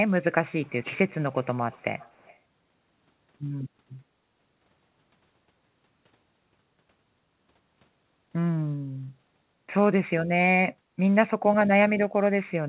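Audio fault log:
0.63–1.14 s, 1.31–1.54 s, 1.72–2.38 s: echo leak. A faint, delayed copy of the speech trails 271 ms behind, roughly 30 dB below it, likely loudspeaker pickup that the far end's echo canceller did not fully remove.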